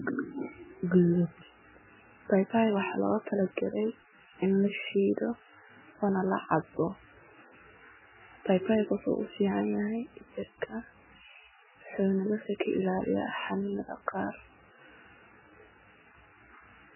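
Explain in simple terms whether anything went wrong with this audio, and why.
MP3 compression, throughout the speech: the sound is dull, with nothing above about 3 kHz, and heavily watery and swirly, likely from an encoder starved of bits.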